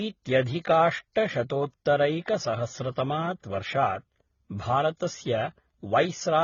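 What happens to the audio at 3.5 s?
At 3.5 s, as throughout the clip, the speech shows transcoding between lossy codecs. A low-rate stage that fits HE-AAC was likely re-encoded as AAC-LC, which spent bits on the earlier damage. The sound is dull and band-limited, with swirly smearing layered over fresh coding noise.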